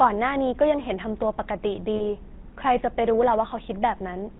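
A buzzy, gravelly roughness runs through the whole speech, with nothing above 4 kHz. This is the GSM full-rate codec, consistent with 13 kbps coding from a pulse-driven vocal-tract model. From 1.96 to 2.05 s, and again from 3.98 to 4.01 s, the sound briefly freezes into a rough metallic ring. These are lost GSM frames, about 40 ms and then 20 ms, each filled by repeating the last good frame.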